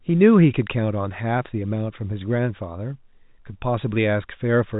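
No faults can be heard in this speech recording.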